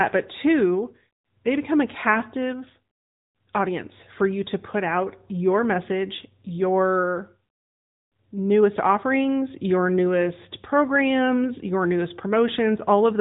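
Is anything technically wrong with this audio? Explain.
Yes. Throughout the speech the sound is thin, boxy and plainly processed, with a buzzy, synthetic edge on the voice and nothing at all above 3.8 kHz. This is the AMR narrowband mobile codec (AMR-NB). It samples at 8 kHz and rebuilds the voice from a vocal-tract model excited by a few pulses every 5 ms, so the missing top end and the artificial texture follow directly. The damage level fits the 10.2 kbps mode.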